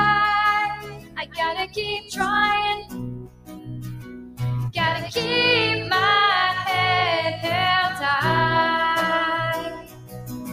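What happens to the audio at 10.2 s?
A speech-tuned noise suppressor left running on non-speech material mistakes steady and fading content for noise, and it swings the level by around 15 dB. Held parts sink while sharp onsets survive, giving a pumping, thinned character around this point.

From 9.6 s to the end at 10.5 s, the suppressor cuts this sound harder than the rest, pulling it down by up to about 15 dB. At 10.2 s steady or fading parts sink in level or have their decay cut short, while sudden parts mostly come through.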